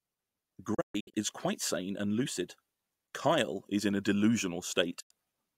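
At 0.74 to 1.14 s, a digital broadcast dropout mutes the speech in short holes totalling 256 ms, the longest 128 ms, each entered through an 8 ms fade. Failed frames were discarded. At 5.00 s a single 96 ms gap recurs.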